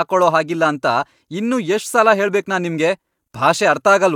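Speech, with nothing technically wrong with it.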